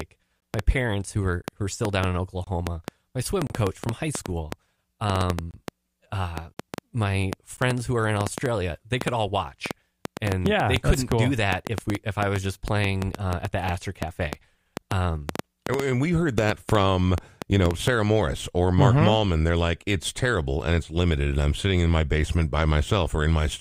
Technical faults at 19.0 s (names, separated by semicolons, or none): none